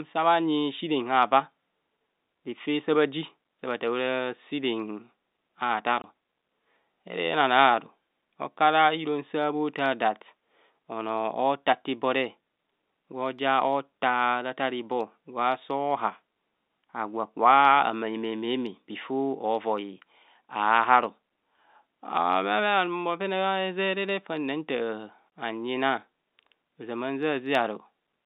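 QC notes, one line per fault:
6.02–6.04 s and 25.30–25.32 s: packet loss filled with silence. Each gap is a 20 ms hole, which fits one lost packet. Its edges are abrupt.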